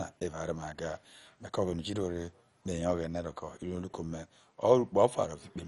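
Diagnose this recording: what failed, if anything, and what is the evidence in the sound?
The damage sits at the codec stage, and it runs the whole length of the speech. Nothing survives above about 11.3 kHz, so the sound is dull and carries a gurgling, granular roughness that is plainly audible, which fits a low rate near 48 kbps. The likely culprit is MP2 compression: Layer II divides the spectrum into 32 equal sub-bands, and when bits run short the upper bands are shut off while the remaining ones are coarsely quantised. On a spectrogram, expect a hard ceiling at 11.3 kHz and blocky, flickering band energy beneath it.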